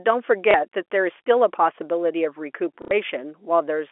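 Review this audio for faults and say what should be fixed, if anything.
Packet loss with the last packet repeated occurs from 0.51 to 0.54 s (30 ms lost) and from 2.82 to 2.91 s (90 ms lost, which fits three 30 ms packets). Each replayed chunk seldom lines up with the pitch cycle, and the longer run buzzes near 33 Hz. Unlike a dropout to silence, the sound never stops: the single repeat gives a small blip and the longer run stutters robotically. Pitch-synchronous concealment and a deeper jitter buffer would prevent this.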